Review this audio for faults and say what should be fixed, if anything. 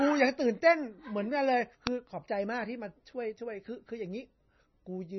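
Throughout the speech, the treble stops dead at 5.9 kHz, and the remaining sound is watery and swirling, with s sounds chirping metallically and onsets smeared. That pattern is likely MP3 compression at a very low bitrate, somewhere in the low twenties of kbps. The encoder, short of bits, discarded everything above its cut-off and zeroed weak frequency lines, which flicker on and off between frames. A plain low-pass filter would dull the top but leave no swirl. To prevent it, encode at a much higher bitrate or use lossless delivery.

At 1.87 s there is an uninitialised buffer: a single loud crack lasting about 1.45 ms, which fits a 64-sample block. The block was played before any audio had been written into it, so stale memory came out as samples. Unlike a click from a dropout or a discontinuity, it comes from leftover memory rather than a gap or jump in the signal. To prevent it, zero-fill or prefill every buffer before it is handed to the output.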